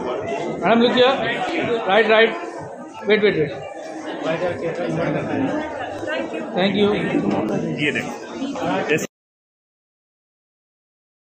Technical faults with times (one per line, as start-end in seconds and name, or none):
1.49-10.49 clock drift buffer slips